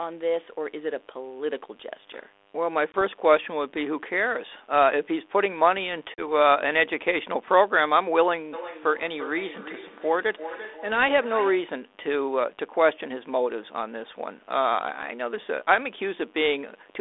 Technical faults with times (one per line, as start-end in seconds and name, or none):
2.92-3.02 packet loss on an ADPCM call
6.14-6.27 packet loss on an ADPCM call
8.53-11.86 feedback echo between two devices